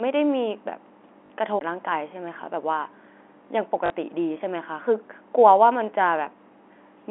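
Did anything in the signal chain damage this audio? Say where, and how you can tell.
Yes. At 1.26 to 1.30 s and again at 3.86 to 3.90 s, the speech turns into a brief robotic buzz, lasting 40 ms each time. This is packet loss with the last packet repeated, in the network stage. It fits two 20 ms packets being lost, with the receiver looping the last one, out of step with the pitch.

From 1.59 to 1.61 s, a tick and a very short mute of roughly 20 ms are followed by the sound resuming from a different point. This is a CD skip in playback from disc storage. The laser jumped to another turn of the spiral, and the player muted until it found its place again.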